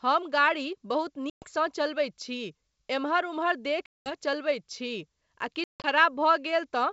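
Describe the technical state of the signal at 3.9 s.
At 3.9 s there is packet loss on an ADPCM call. From 3.86 to 4.13 s, after "एम्हर उम्हर", about 200 ms, roughly ten packets, drop to hard-edged silence. The decoder's predictor then resumes out of step with the sender.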